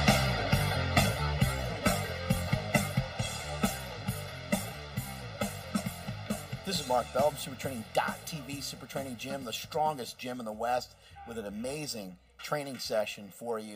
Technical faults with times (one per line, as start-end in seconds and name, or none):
0.00-13.75 channel delay (comb filtering)